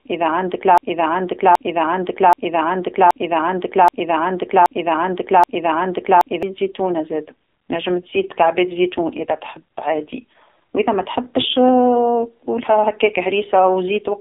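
From the first instant to 6.43 s, a broken-record loop is already under way: a 0.78 s fragment repeats back to back seven times, likely because the player or stream stalled. On a waveform, identical blocks tile end to end, and the audio for that stretch is lost.

Throughout, the AMR narrowband mobile codec confines the sound to roughly 250 Hz to 3.7 kHz, with nothing above 3.9 kHz. A spectrogram shows a hard ceiling. The heavy damage, consistent with a low rate near 5.9 kbps, makes the speech buzzy and synthetic.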